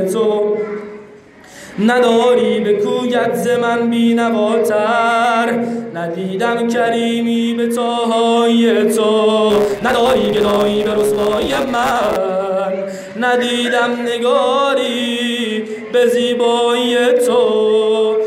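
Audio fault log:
9.50–12.16 s, block size mismatch (truncated): a 138 Hz buzz rides on the sound, which runs 1.6 times fast at near-normal pitch. Each written block, which fits a 512-sample size, is read only partly, so its tail is dropped at every block boundary.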